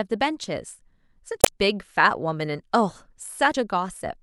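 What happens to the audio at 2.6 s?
Nothing goes wrong at 2.6 s: the speech there is intact, with no dropout, click, distortion or other fault.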